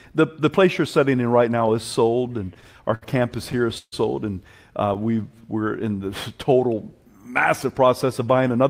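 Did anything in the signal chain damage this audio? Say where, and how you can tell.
Yes. Repeated stalls (stutter) at the network jitter buffer, 2.27 to 3.94 s after "in right now is": twelve brief holds, longest 140 ms, extend earlier sound rather than dropping any, unlike packet-loss gaps.

A jitter buffer slow-down from 4.77 to 5.42 s, just before "we're in the": repeated pitch periods stretch it to 91% speed, adding 66 ms, yet pitch stays put, unlike slowed playback.

A jitter buffer speed-up from 7.59 to 8.64 s: removing short pitch-period slices, about a tenth of a second in total, hurries the speech to 109% while the pitch stays unchanged.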